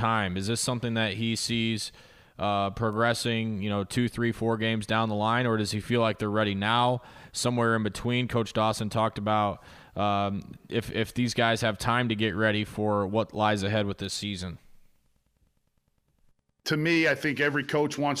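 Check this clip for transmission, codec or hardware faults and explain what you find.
One fault is present: a bit error spike at 2.93 s, just after "that he sees uh". A flipped bit knocked the waveform by a power of two for only a sample or two before it snapped back, producing one sharp broadband tick peaking at about -34 dBFS. Unlike a dropout or buffer glitch, nothing goes missing and no gap follows; the tick bears no relation to the surrounding speech.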